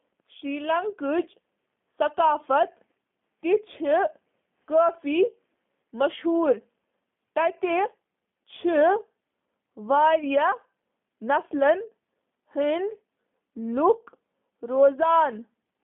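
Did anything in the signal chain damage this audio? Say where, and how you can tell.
Yes, at the codec stage: the whole clip went through a G.729 codec, consistent with an 8 kbit/s VoIP link. Rebuilding each 10 ms frame from a vocal tract model and a few pulses leaves the speech plainly rough and synthetic, confined to 150 Hz to 3.5 kHz.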